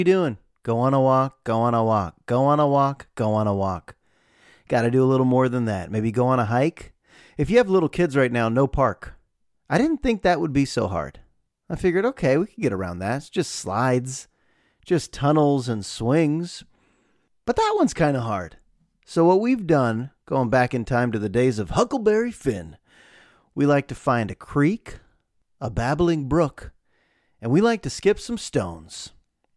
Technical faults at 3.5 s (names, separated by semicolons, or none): none